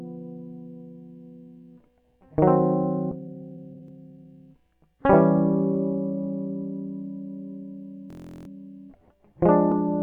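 A music clip with three separate faults. At 3.11 s there is a skip ahead: about a second of music is dropped and playback jumps straight on with no gap. On a waveform the two sides butt together with a sudden change in envelope, and a spectrogram shows a hard vertical seam where the texture changes abruptly. From 3.21 to 4.54 s a jitter buffer speed-up follows. The receiver, holding more audio than it wanted, trims short pitch-period slices over and over, taking out around a third of a second in total. The music runs at about 124% speed with unchanged pitch, so the tempo visibly lurches. On a spectrogram, harmonic lines keep their height while note onsets crowd closer together. From 8.10 to 8.48 s a system hang loop replaces the music with a 23.22 ms fragment repeated 16 times. That length fits a 1024-sample buffer that the hardware kept cycling while the system froze. It sounds like a steady buzz at 43.1 Hz. 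The waveform shows an identical short pattern tiled end to end, and the spectrogram shows a frozen, striped band with evenly spaced lines at the loop rate.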